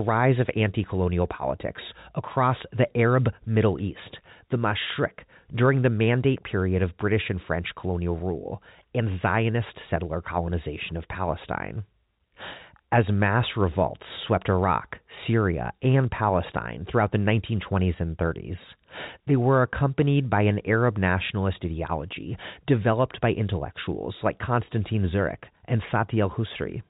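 No technical faults can be heard in the speech, which carries the narrowed bandwidth of a G.711 telephone channel.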